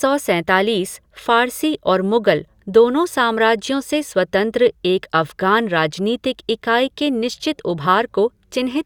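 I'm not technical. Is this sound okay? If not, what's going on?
Yes, nothing wrong can be heard anywhere in this speech recording.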